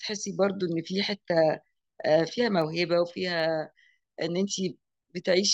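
From 0.27 s to 4.96 s the speech carries a row of sharp ticks, about seven of them, spaced roughly 0.7 s apart and differing in strength. These are word clock ticks: the receiving device reads the digital link on its own clock rather than locking to the sender's. The two clocks differ by something on the order of 30 ppm, so they periodically slip past each other, and at each slip a single sample is dropped or repeated, leaving a brief click.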